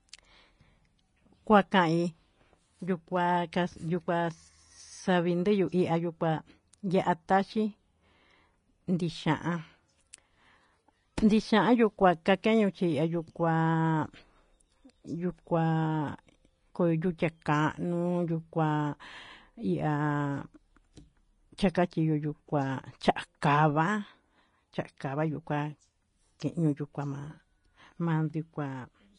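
Throughout, the speech has likely passed through low-bitrate Vorbis compression. Its treble is quantised so coarsely that fine detail turns to hiss, and nothing remains above 10.5 kHz. The result is grainy, roughened speech with softened consonant attacks, damage consistent with a stream around 31 kbps.

At 23.41 s, pre-echo appears where a sharp onset fell late in a transform block. Quantisation noise sized for the loud onset was spread across the quiet moment before it, producing a brief hiss about 13 ms ahead of the attack, which sounds smeared.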